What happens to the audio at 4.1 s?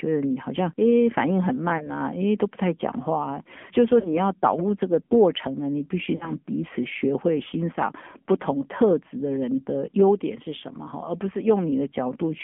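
Between 4.00 and 4.17 s there are lost AMR speech frames. About 40 ms of coded speech never arrived intact, which fits two consecutive 20 ms frames failing their check. The decoder covered the gap by repeating its last good pitch and vocal tract settings while lowering the gain. The sound smears into a short, drawn-out warble that sinks toward silence, then returns weak or rough for a moment. On a waveform this looks like a decaying envelope and then a soft re-entry. On a spectrogram the harmonic stripes freeze flat and fade out instead of following the natural pitch contour. The gap sits inside the AMR narrowband mobile codec coloration that runs through the whole clip: at 7.4 kbps everything is confined to roughly 200 Hz to 3.4 kHz and carries a plainly buzzy, synthetic edge.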